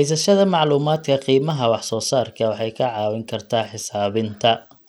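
Bluetooth SBC compression runs through this speech clip from start to finish: the treble flickers and drops away while a gritty, aliased grain rides on the sound, which points to a low bitrate near 96 kbps. The likely cause is a starved bit pool leaving SBC's upper sub-bands with too few bits.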